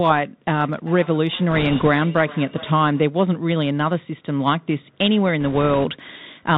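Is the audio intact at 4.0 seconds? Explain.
No. At 4.0 s, as throughout, the Bluetooth CVSD headset codec's one-bit up/down tracking scratches sibilants and adds granular hiss; the spectrogram stops flat at 4 kHz.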